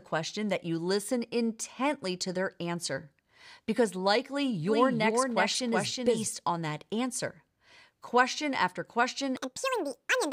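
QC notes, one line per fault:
4.67–6.27 s, doubled audio track: a second full-band copy runs around 0.4 s behind, about 5 dB down, with no decay or room colour, cutting in and out abruptly. Most likely a slower capture path or an out-of-step edit stacking two copies.
9.37–10.33 s, section at the wrong speed: the last stretch plays 1.79 times too fast, so everything jumps up close to ten semitones and rushes together, pitch and tempo shifting at once. Likely a player or edit running that bit on the wrong clock.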